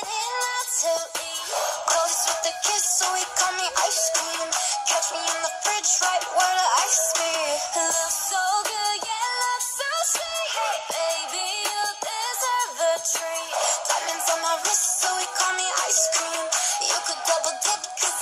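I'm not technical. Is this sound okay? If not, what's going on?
No. There are four sharp clicks, at 3.47, 7.48, 13.64 and 15.5 seconds. These are likely dropped samples, where a tiny sliver of audio goes missing and the sound jumps.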